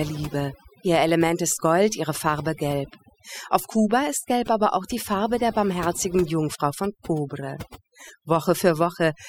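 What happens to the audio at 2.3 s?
At 2.3 s, as throughout the speech, overdone noise removal is at work. Bands near the estimated noise floor are pulled down hard or gated off, taking quieter speech detail with them, so the background drops and breaks up into twinkling specks.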